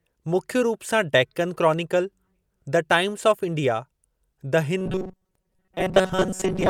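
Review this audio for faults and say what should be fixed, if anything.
Audio likely arrived too seldom from 4.78 s to the end at 6.69 s, so playback looped a roughly 5.3 ms buffer in place of most of the real audio. The result is robotic sound from repeated short buffers: a rigid 188 Hz metallic buzz loosely tracking the speech. Preventing it means giving the stream steadier delivery and deeper buffering so gaps never force short-loop filling.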